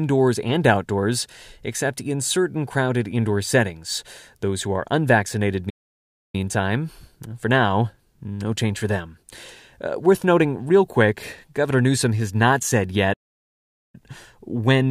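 Two playback stalls interrupt this speech clip: the first at 5.69 s, right after "who are unvaccinated", lasting about 0.64 s, and the second at 13.13 s, after "has not said", lasting about 0.80 s before "when or" resumes. Each cuts the sound off mid-flow, likely because the player ran short of data or its thread was blocked. On a waveform each shows as a flat line, and on a spectrogram as a blank vertical band.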